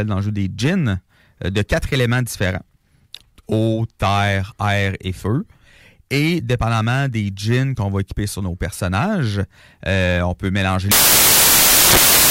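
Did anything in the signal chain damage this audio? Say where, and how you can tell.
Yes. The sample-format conversion stage failed: from 10.91 s to the end at 12.3 s, right after "euh on peut mélanger", the speech turns into loud, harsh broadband noise. The samples were built from the wrong bytes, so the fast-changing low bits became the loudest part of each value. This differs from a noise burst or clipping because the noise comes from the speech's own bytes being misread, not from added sound or level overload.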